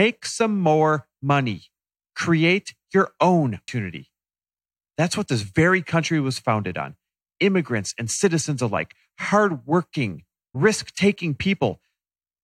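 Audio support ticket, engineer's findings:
Damaged data in a compressed stream: two brief glitches in the speech, at 3.67 s after "your own" and at 10.54 s after "and citizens alike hardworking". The decoder misreads corrupt frames and resyncs. Spectrogram shows thin broadband vertical streaks; the waveform shows a sharp glitch.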